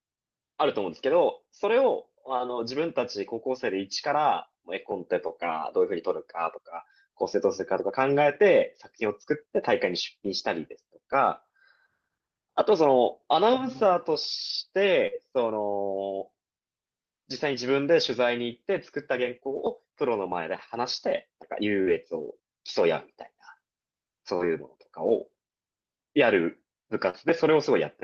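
At 5.27 to 5.31 s, a short concealed packet loss: about 20 ms of audio never reached the decoder in time, so the receiver extended the preceding sound to cover the hole. It is heard as a brief smear. On a spectrogram the harmonics run on flatly for that instant instead of following the natural contour.

Overlapping it, from 5.29 to 5.31 s, one lost packet was rebuilt from error correction. The following packet carried a low-bitrate copy, so the 20 ms plays without a gap but sounds rougher and noisier. A spectrogram shows a thin grainy column with blurred harmonic detail.

The same pairing returns at 15.07 to 15.18 s. First, a short concealed packet loss of about 40 ms, from 15.07 to 15.14 s, produces a slightly longer smear or wobble. The waveform shows a smoothed, repetitive stretch where the envelope stops varying naturally. Then two lost packets rebuilt from error correction, from 15.12 to 15.18 s, give 40 ms of coarser, noisier sound. 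In the spectrogram, the fine harmonic banding dissolves into a hazier, grainier patch for that short span.

Between 19.24 and 27.16 s, scattered short gaps: about three small holes, the longest roughly 50 ms, each patched by continuing the last sound. Together they cover only about a hundredth of that stretch, heard as isolated ticks or hiccups. The spectrogram shows a few narrow, frozen or smudged slivers spaced apart. Across the whole clip, the call path's spectrum tops out near 8 kHz.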